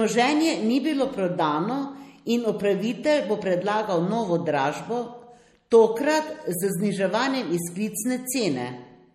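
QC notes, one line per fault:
Throughout, MP3 compression: the speech has a plainly audible watery, swirling quality, likely from a low-bitrate MP3 encode consistent with about 48 kbps. The encoder discarded everything above 16.4 kHz and, short of bits, zeroed weaker frequency lines, which flicker on and off between frames. On a spectrogram this shows as a flat ceiling at 16.4 kHz and patchy, blocky gaps in the upper bands. Onsets are smeared.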